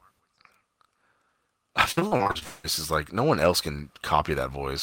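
From 1.91 to 2.43 s the speech goes choppy: repeated packet loss, around eight short holes (the longest about 54 ms) each papered over by stretching the previous sound, so nearly half that stretch is filler.

Right after, from 2.43 to 2.66 s, there's roughly 0.2 s where the last sound just smears on as a fading buzz instead of real audio, likely a long network dropout, before things pick up again at "is like".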